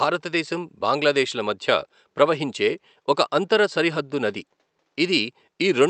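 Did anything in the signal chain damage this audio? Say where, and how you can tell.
No, nothing in the chain has damaged this speech recording; the only thing beneath the speech is the room's own background noise, sitting about 51 dB below it, which belongs to the acoustic space rather than to any stage of the system.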